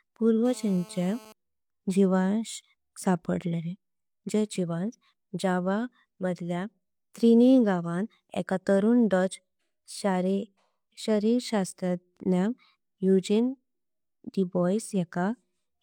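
From 0.45 to 1.33 s a GSM phone buzz sits under the speech, a hard, raspy tone at about 217 Hz with a dense stack of harmonics, roughly 24 dB below the speech. The source is a nearby 2G handset whose transmitter pulses 217 times a second; the audio circuitry rectifies those radio bursts into the signal path. The buzz holds steady for its whole duration, consistent with a phone in an active call rather than a data transfer.

At 11.71 s there is a gap between stream segments: a hard-edged dropout of 4.4 ms where the player has filled a timing hole with silence. The time stamps of two consecutive segments fail to line up, leaving a small span with no assigned audio, and the position fits a boundary between 6-second segments. Nothing is lost from the stream; the break comes from the added silence.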